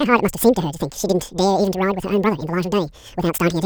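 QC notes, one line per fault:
Throughout, wrong sample rate: speech runs twice as fast and a full octave high, chipmunk-like, which fits 24 kHz audio played back at 48 kHz without conversion.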